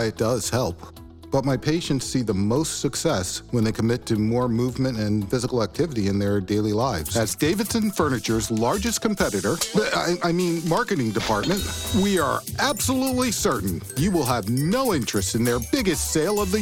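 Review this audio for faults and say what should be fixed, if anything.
CD scratch ticks, 6.66 to 7.19 s: three brief clicks, each under a millisecond, repeat once per disc turn where a blemish defeats error correction.

Prevention: clean or replace the disc and re-rip with a secure, verifying ripper.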